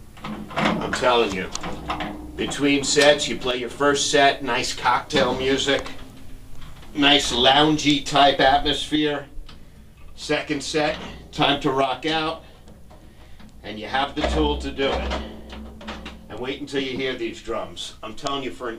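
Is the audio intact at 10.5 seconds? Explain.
No. At 10.5 seconds the audio sits inside a one-channel dropout running from 8.96 to 11.36 s. The sound falls abruptly by about 6 dB. Likely one stereo channel went silent, halving what both channels shared in the mono sum.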